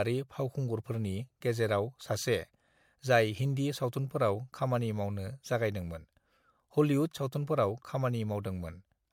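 Throughout the speech there is generation loss: a swirly, hollow smear with blurred consonant attacks and nothing above 19.2 kHz. It is likely from repeated MP3 encoding, around four passes near 96 kbit/s. One encode at that rate wouldn't sound this washed out.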